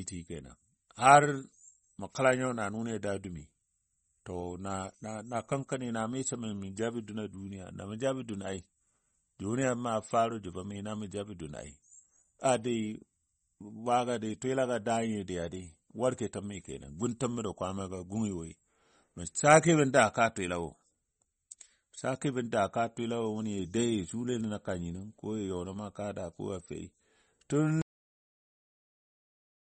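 From the start, the speech carries plainly audible MP3 compression. Nothing is present above 8.4 kHz, and the dullness, watery swirl and smeared consonant onsets fit a likely low-bitrate MP3 encode, around 32 kbps. With so few bits available, the encoder drops the treble at a fixed ceiling and discards weaker spectral components. Those components flicker in and out between frames, which produces the unsteady, metallic texture on sibilants.

At 27.82 s the audio has a cut-off end. The sound stops mid-stream and falls straight to digital silence, with no natural decay, and stays silent to the end of the file. The final stretch of audio was never written out, so whatever was sounding at that instant is abruptly truncated rather than allowed to finish.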